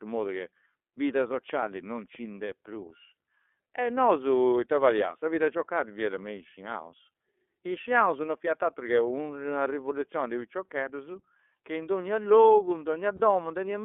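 Throughout, the speech is squeezed into a telephone band of roughly 300 Hz to 3.5 kHz and carries the slightly rough, synthetic edge of the iLBC codec. Its coarse texture fits the 13.33 kbps mode with 30 ms frames. Unlike plain band-limiting, which only dulls the sound, the roughness comes from each frame's excitation being rebuilt independently, and that coding damage is plainly audible.

From 13.17 to 13.20 s, just after "in donnia logu in", lost iLBC frames open a gap of about one frame, 30 ms. The decoder covers it by repeating the last pitch cycle with added noise, so it sounds like a brief held, faintly buzzy vowel rather than silence or a click. Because iLBC frames stand alone, the speech recovers almost at once instead of smearing over the following frames.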